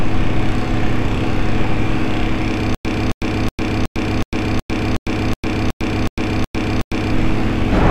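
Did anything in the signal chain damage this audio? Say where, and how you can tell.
Yes. From 2.75 s to 7.13 s the audio turns into a stutter with silent gaps: the same 267 ms burst returns 12 times, each followed by about 103 ms of dead silence, every 370 ms. This likely comes from a stalled playback buffer, which replays its last fragment and then runs empty.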